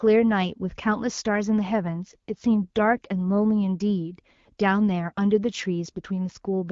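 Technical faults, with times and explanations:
1.78–3.12 s AMR rate drop: the link forced the AMR-WB coder to a lower rate, consistent with 12.65 falling to 8.85 kbit/s, so speech turns rougher and more synthetic without losing bandwidth.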